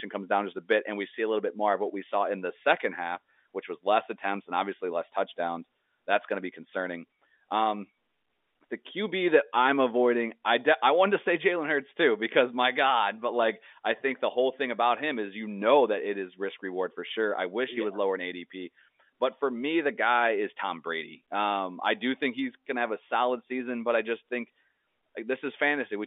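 The speech carries no technical faults, and what can be heard is an ordinary telephone-band signal consistent with G.711 telephone coding, with content sitting roughly between 250 Hz and 3.6 kHz and nothing above that range.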